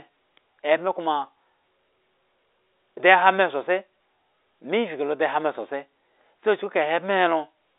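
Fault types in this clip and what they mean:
No faults are present; the speech sits in a G.711 A-law telephone channel at 64 kbps, band-limited to 300 Hz to 3.7 kHz with nothing above 3.8 kHz.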